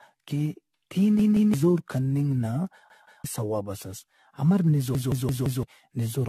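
Throughout, the speech was likely decoded and re-encoded around ten times with a lossy codec consistent with 64 kbit/s AAC-LC. This generation loss leaves it swirly and hollow, with blurred attacks and nothing above 14.2 kHz.

At 1.20 to 1.54 s, 2.90 to 3.24 s, and 4.95 to 5.63 s, fresh audio arrived late, so a repeated buffer of about 171 ms (fitting an 8192-sample buffer) was replayed. The first two stutter through two hard-joined extra repeats, losing roughly 0.3 s each. The last repeats four times, losing about 0.7 s.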